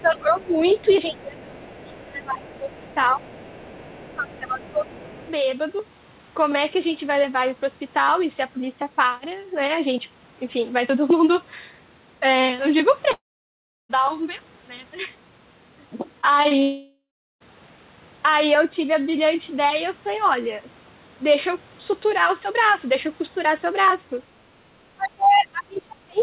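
Right from the start there's a faint second voice under the main talker, roughly 25 dB down, from 0 to 1.23 s, again at 1.62–2.02 s, and again from 2.35 to 5.31 s. That's other side's voice leaking through: most likely the far end was playing on a loudspeaker and the echo canceller didn't strip all of it out of the mic, so scraps of it come through, quiet.

Overlapping that same stretch, the main talker keeps ducking: 0.01–0.62 s dips by up to about 20 dB, 1.07–3.28 s by up to about 25 dB, and 4.12–5.26 s by about 15 dB. This is speech suppressed in double talk, with both sides talking at once. The canceller likely couldn't tell the local voice from the echo and pulled the level down on everything. The same thing comes back hardest at the very end, 24.96 s to the close, with drops of up to about 30 dB.

At 13.12–13.91 s there's a long network dropout. The receiver extends the last bit of sound into a fading buzz, and most of those roughly 0.8 s end up as silence. 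The audio then picks up later with that chunk simply gone, and the likely cause is that nothing arrived from the network for that long. A second one hits at 16.62–17.42 s, about half of it silent after the fill decays.

Just before that, there are three quick blips: short concealed packet loss at 16.21–16.25, 16.43–16.47 and 16.49–16.52 s. Each is about 20 ms of missing audio that the receiver patched by stretching what came before and crossfading back. They come across as tiny smears or wobbles bunched together. Throughout, the band stops at 4 kHz, which fits a narrowband telephone codec on the call path.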